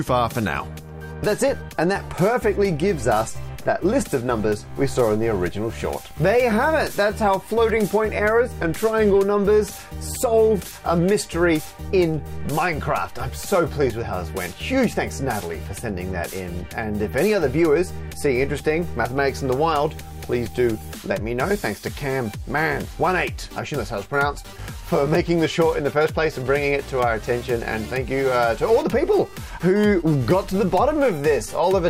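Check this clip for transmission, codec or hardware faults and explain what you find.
Nothing found: no transmission, codec or hardware fault is audible anywhere in the clip.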